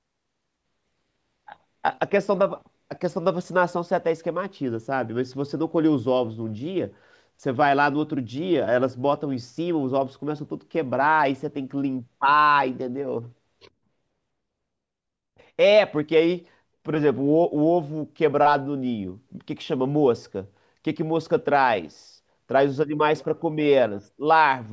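Nothing stood out on listening to this speech recording.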